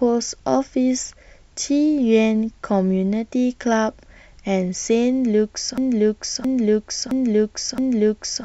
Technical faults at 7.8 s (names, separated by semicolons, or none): broken-record loop